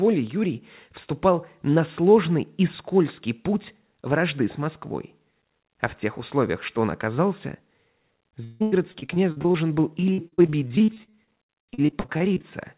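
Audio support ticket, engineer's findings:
Repeated packet loss (robotic sound), 8.44–9.56 s and 10.00–12.45 s: packets dropped or late in bursts, each hole patched by stretching the last sound. Choppy, robotic speech with chunks missing; longest hole 162 ms, then many short ones up to 60 ms.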